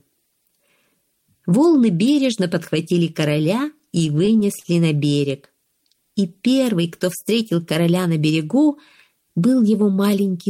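From 3.79 to 4.67 s, repeated stalls (stutter): ten brief holds up to 43 ms, the buffer underrunning and repeating sound. Spectrogram shows smeared, frozen strips; audio drags, stutters.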